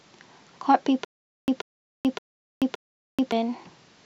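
From about 1.05 s to 3.32 s the speech falls into a stutter with silent gaps: a 136 ms burst plays, then about 433 ms of dead digital silence, and the same burst comes back four times at a steady 569 ms pace. It's likely a player or stream stall, where each retry replays the last buffered fragment and then runs dry. Whatever speech belonged in those two-odd seconds is simply gone.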